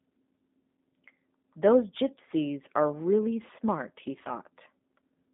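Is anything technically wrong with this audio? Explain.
Yes. The whole clip carries G.729 codec damage, and it is plainly audible. The speech is rebuilt from a vocal tract filter, a pitch predictor and sparse pulses, which fits an 8 kbit/s voice line. It sounds rough and slightly synthetic. The band runs from 200 Hz to 3.6 kHz, and nothing passes above 3.8 kHz.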